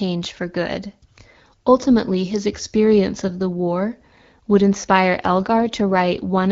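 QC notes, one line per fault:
5.19–6.52 s, AMR rate drop: after "the war would inspire" the link forces AMR-WB to a lower rate, consistent with a step from 12.65 to 8.85 kbit/s. Fewer bits model the speech, so it turns rougher and more synthetic to the end, with no gap and no narrowing of bandwidth.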